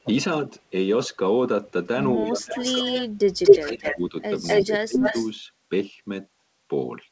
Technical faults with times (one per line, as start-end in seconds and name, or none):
2.17-3.13 speech suppressed in double talk
2.59-3.97 echo leak
3.44-4.14 speech suppressed in double talk
4.46-4.66 echo leak
4.66-5.15 speech suppressed in double talk
5.01-5.30 echo leak